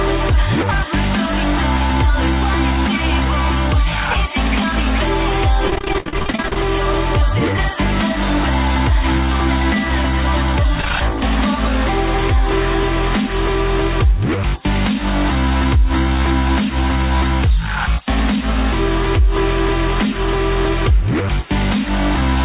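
From 5.68 to 6.56 s the sound turns choppy and robotic, with short pieces dropping out. This is repeated packet loss: about twenty holes, the longest 52 ms, each patched by extending the previous sound, so nearly half that stretch is filled-in audio. Throughout, nothing reaches above 4 kHz, which fits a G.711 call codec.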